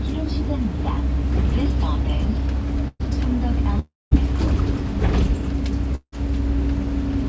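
A recording of everyday sounds, carried over a call path whose G.722-style coding leaves nothing above 8 kHz, has three gaps. At 2.88 to 3.01 s, a burst of packet loss removed about 120 ms of audio. The receiver carries the last sound forward as a fading buzz or hiss for roughly 115 ms, with about 20 ms of silence, before resuming later in the sound. Two longer stretches, at 3.79 to 4.13 s and 5.95 to 6.14 s, were likely long network dropouts losing about 320 ms and 180 ms. Each starts with concealment fading away, then leaves roughly 190 ms and 70 ms of silence before the audio returns further on.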